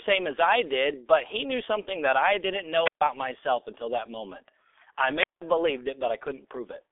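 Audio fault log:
throughout: G.723.1 codec. The whole clip sits inside a telephone band of roughly 300 Hz to 3.5 kHz, with nothing at all above 3.7 kHz, and the heavy coding damage fits a rate near 6.3 kbit/s. Long 30 ms frames and a slowly updated voice model leave the speech muffled and hoarse, with consonants smeared together. Unlike plain band-limiting, the roughness and blurred onsets come from the coder itself, not just missing treble.
2.83–3.02 s and 5.20–5.42 s: wireless microphone squelch dropout. Each event begins with a short swell of hiss as the radio signal fades. The receiver's squelch then shuts the output, leaving a hole of near silence of about 140 ms the first time and about 180 ms the second, before the sound returns. The rising static before each gap distinguishes this from a packet-loss dropout, which cuts out abruptly with no noise leading in.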